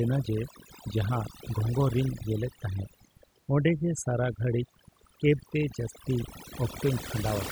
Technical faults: overdone noise removal

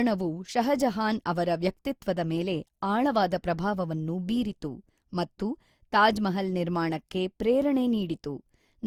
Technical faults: generation loss

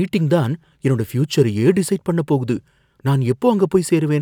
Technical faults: none

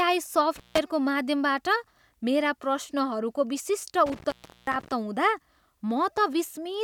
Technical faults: intermittent contact

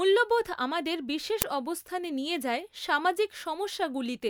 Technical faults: uninitialised buffer

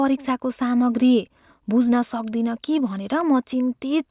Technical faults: none

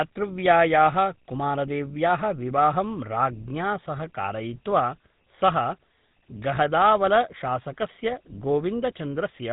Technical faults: GSM full-rate codec

